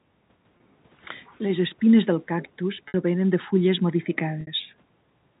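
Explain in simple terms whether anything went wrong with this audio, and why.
Three short dropouts occur, at 0.57 s, 2.88 s and 4.41 s. This is packet loss with pitch repetition. Bits of the signal went missing. The phone system filled each gap by repeating the last vibration of the voice. The first gap is 30 ms. The other two are 60 ms each.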